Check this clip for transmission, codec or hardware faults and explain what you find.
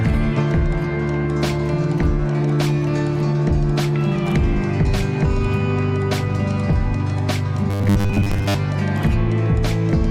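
Two transmission faults can be heard.

At 0.37 to 0.39 s there is a skip ahead. A stretch of around 0.4 s was discarded while later audio was already queued, so playback leaps forward with no gap filled in, and the sound on either side is spliced almost directly together.

From 7.7 to 8.55 s there is robotic sound from repeated short buffers. New audio likely arrived too rarely, so a short chunk of about 10 ms was replayed over most of that stretch. The repetition imposes a fixed 100 Hz buzz, giving a rigid, metallic tone.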